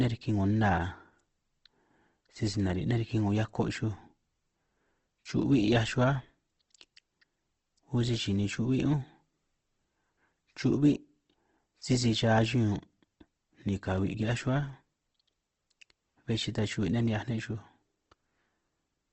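Opus compression, throughout: the speech sounds grainy and rough, with nothing above 8.2 kHz, likely low-rate Opus filling starved bands with noise.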